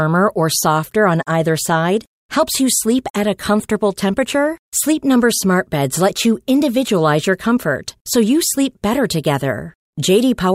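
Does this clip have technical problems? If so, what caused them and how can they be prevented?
No, nothing in this speech clip stood out as a technical problem on listening, so there is no cause to trace or prevention to suggest.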